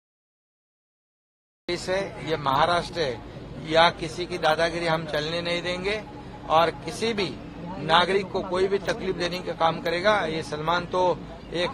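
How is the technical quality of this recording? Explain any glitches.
The recording has one glitch, a cut-off start. From 0 to 1.69 s there is digital silence, then audio enters abruptly mid-sound because capture began late, with no natural attack.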